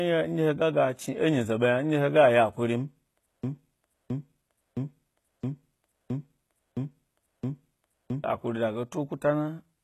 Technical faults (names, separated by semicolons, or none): HE-AAC compression; broken-record loop